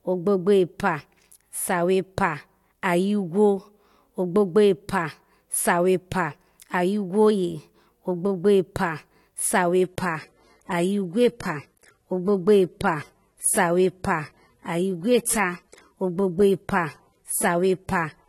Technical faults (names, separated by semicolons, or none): adaptive stream at a lower bitrate